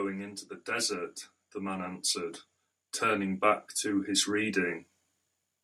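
Automatic gain rising occurs from 0.65 to 2.44 s and again from 3.01 to 4.84 s. Each time the gain control judged the speech too quiet and ramped its gain up, by about 5 dB and then about 6 dB, so voice and background swell together.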